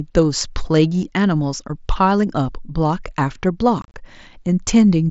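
From 3.82 to 3.94 s the speech breaks into a brief, chopped crackle: short holes with hard edges, the longest about 30 ms. This is unconcealed Bluetooth headset packet loss. Around 90 ms of the wideband mSBC stream went missing, which points to roughly a dozen lost frames, and silence or an idle pattern filled the gaps.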